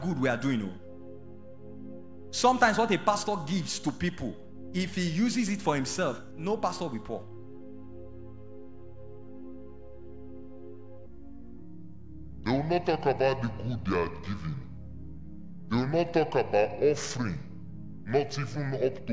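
Wrong sample rate from 11.06 s to the end at 19.13 s: the sound abruptly slows to about two-thirds speed and drops about 7 semitones in pitch. This fits samples recorded at 24 kHz being played back at 16 kHz without conversion.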